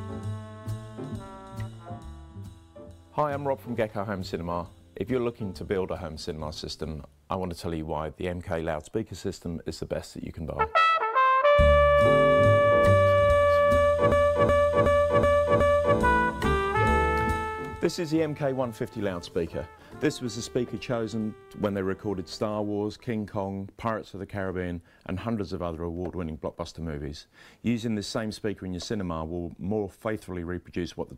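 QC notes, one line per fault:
14.12–15.98 s: system hang loop. One 0.37 s slice replays identically five times at 2.69 Hz, a frozen driver's ring buffer rather than dropouts.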